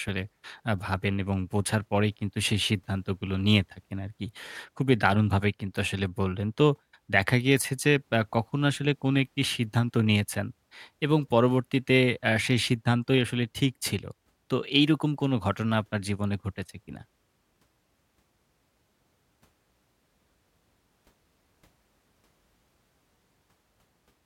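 No technical faults can be heard anywhere in the recording, which holds steady from its opening moment to its last.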